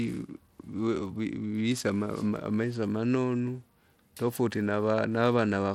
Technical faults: Bluetooth SBC compression

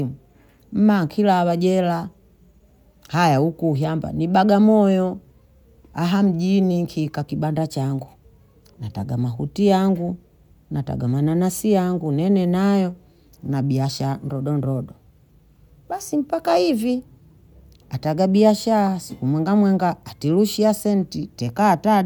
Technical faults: none

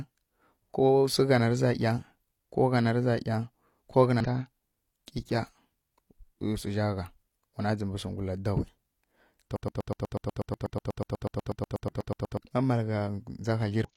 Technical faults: damaged data in a compressed stream; broken-record loop

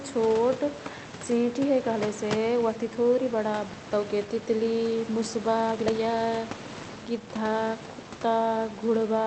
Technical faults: skip ahead; jitter buffer speed-up

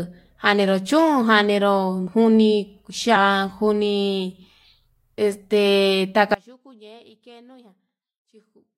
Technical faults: compressed frames skipped; audio dropout to a faint residue

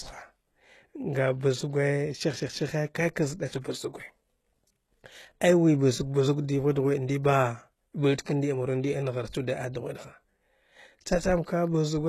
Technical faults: HE-AAC compression

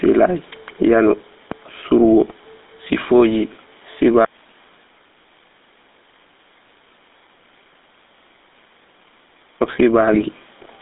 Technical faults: gain pumping; GSM full-rate codec; GSM bit errors

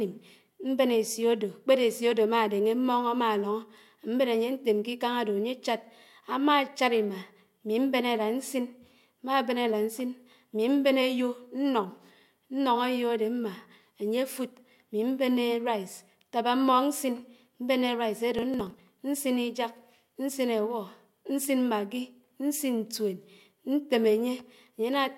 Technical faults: processor overload crackle

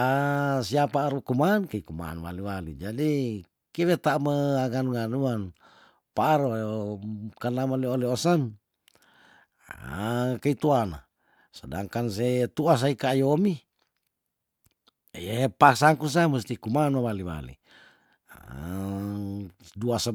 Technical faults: none

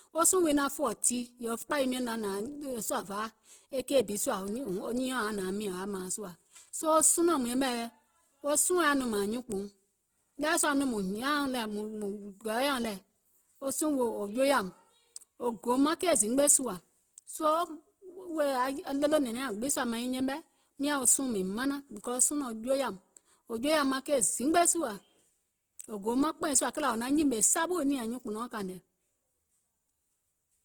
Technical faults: Opus compression

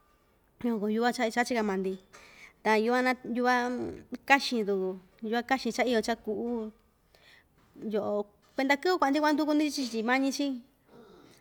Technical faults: none

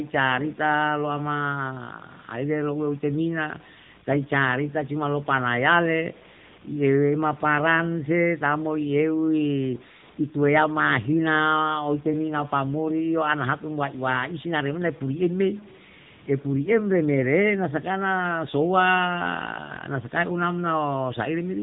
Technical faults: AMR narrowband mobile codec

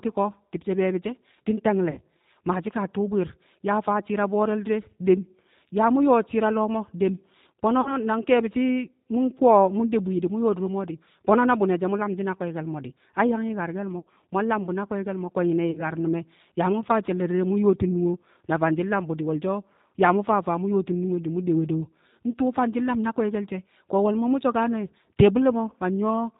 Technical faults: G.729 codec; VoIP packet loss concealed by the speech codec

